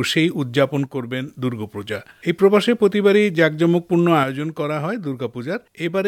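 At 0.86 s the level drops abruptly by about 6 dB and holds until 1.28 s. It drops again at 4.23 s and stays down to the end. One channel drops out, likely: the shared content loses half its level in the mono sum.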